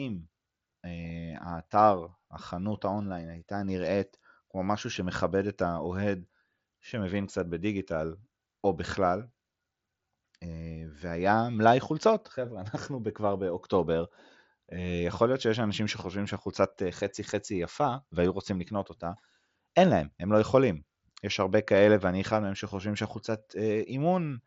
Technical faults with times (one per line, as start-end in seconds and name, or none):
none